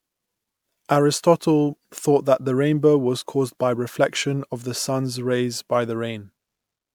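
Throughout, the speech sounds swirly, smeared and hollow with blurred attacks. This is generation loss, likely from about four MP3 passes at roughly 128 kbit/s, each compounding quantisation noise.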